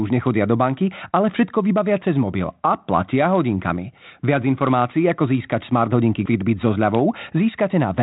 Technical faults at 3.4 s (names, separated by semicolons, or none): none